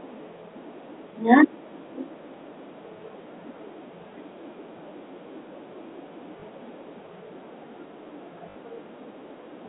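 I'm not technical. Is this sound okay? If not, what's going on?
No. There are two brief glitches from packet loss with last packet repeated. When bits of the call went missing, the receiving end filled the gap by replaying the last snippet it had. At 6.40 to 6.42 s that causes a small blip. At 8.50 to 8.56 s, a longer repeat makes a short robotic buzz, which fits three 20 ms chunks in a row. Unlike a dropout, the sound never goes silent; it stutters instead. The narrow telephone-line quality is normal for a phone call.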